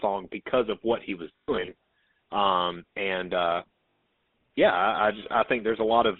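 Speech passed through the GSM full-rate codec, which models the vocal tract and drives it with a coarse, regularly spaced pulse excitation at a rate that fits 13 kbps. Throughout, the sound is confined to roughly 300 Hz to 3.7 kHz and carries a plainly audible buzzy, gravelly roughness. Lost GSM frames occur from 1.36 to 1.73 s: about 200 ms of frames dropped out, scattered over 320 ms, with the longest run around a tenth of a second. The decoder repeated the last good frame's settings, so the sound freezes into a rough, metallic ring. A second loss, from 3.90 to 4.02 s, lasts 120 ms and gives the same held, ringing smear instead of fresh sound. GSM phone buzz enters from 4.69 to 6.05 s because a nearby 2G phone was transferring data. Its audio circuitry rectified the radio bursts, producing a hard, raspy 217 Hz buzz rich in harmonics, about 29 dB below the speech, coming and going independently of it.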